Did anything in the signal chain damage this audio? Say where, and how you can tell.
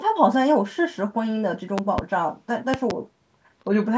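Yes. A loud pop occurs at 1.78 to 2.01 s and again at 2.74 to 2.93 s. Each is a double pop, peaking about 15 dB and then about 20 dB above the speech, which continues underneath. The likely cause is voltage steps in the analogue wiring, such as a loose plug.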